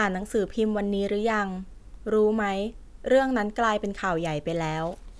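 No technical faults can be heard anywhere in the speech.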